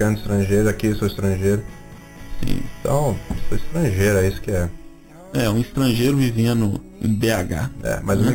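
Imaging from sample-and-hold upsampling, throughout: repeating samples unfiltered from 8 kHz to 44.1 kHz mirrors the spectrum into 4–8 kHz, a metallic fizz about 19 dB down.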